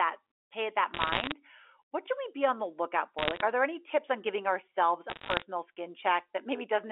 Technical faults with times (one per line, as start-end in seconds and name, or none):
0.94-1.32 bit errors on a digital phone line
3.18-3.41 bit errors on a digital phone line
5.10-5.42 bit errors on a digital phone line